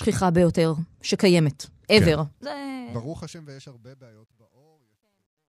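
A fade-out stage that drops to too few bits without dither, which fits about 12 bits, causes truncation distortion from 2.20 s to the end at 5.49 s. As the speech fades, it turns gritty, and from 3.88 s it is at its worst.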